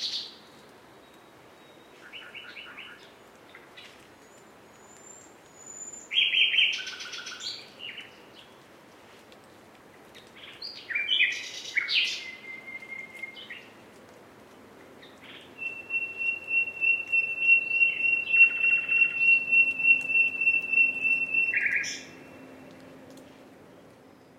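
The recording of sounds shows no technical faults anywhere in the signal.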